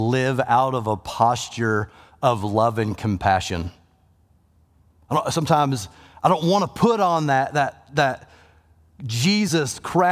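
Nothing stood out on listening to this speech recording.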